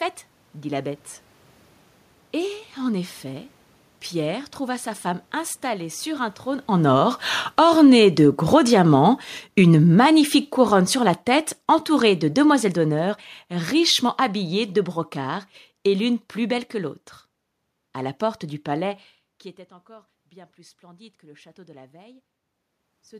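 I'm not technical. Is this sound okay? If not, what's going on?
No, not quite. Around 6.7 s, just after "installée sur un trône", the speaker gets closer and louder, and the automatic gain falling kicks in. The recorder turns itself down slowly until about 16.2 s, just before "belle que l'autre", so the voice and the room noise sink together.

Then around 19 s the speaker drops back and gets much quieter. After "du palais qui était", from about 19.9 s to 22.3 s, you hear automatic gain rising: the recorder slowly turns back up, and the voice and background swell together.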